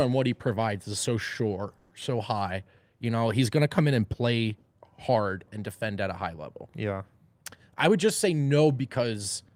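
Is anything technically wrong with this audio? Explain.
Yes, there are two faults. A call audio freeze at 1.77–1.93 s, right after "provides is so sure": delayed packets likely drained the jitter buffer, so the receiver stretched the last sound into a fading buzz for 140 ms. The speech then resumes where it stopped, with nothing lost.

A jitter buffer speed-up at 7.89–9.14 s: the receiver trimmed tiny pitch-period slices to shed about a tenth of a second of excess delay, so the speech runs 108% fast and sounds hurried at unchanged pitch.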